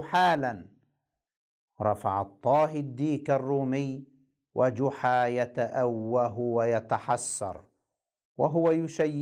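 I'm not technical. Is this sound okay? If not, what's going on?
Yes, this speech sounds fine, with nothing wrong to point out anywhere in it.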